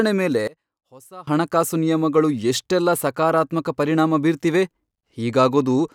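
From 0.47 s to 1.27 s the speech suddenly drops by about 23 dB, as if only a faint residue remains, before returning to full level. That collapse is what one channel inverted sounds like on mono playback: the likely cause is reversed polarity on one stereo channel, so the centred voice cancels when left and right are summed, leaving just the small difference between them.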